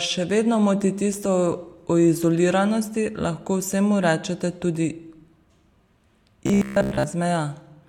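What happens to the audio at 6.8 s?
From 6.47 to 7.07 s the speech collapses into robotic sound from repeated short buffers: a rigid, metallic buzz at 66.7 Hz, likely from a roughly 15 ms buffer replayed for most of that span. Unlike dropouts, there are no gaps.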